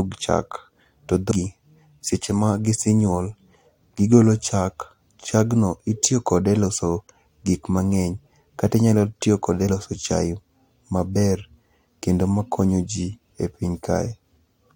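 Speech clip with two brief bursts of damaged data in a compressed stream, at 1.30 s and 9.69 s, each lasting well under 20 ms. At both points a short, harsh blip cuts into the speech where corrupted bytes in the encoded stream left the decoder unable to parse those frames correctly. The decoder outputs garbage for that instant, loses frame sync, and recovers once it finds the next valid frame header.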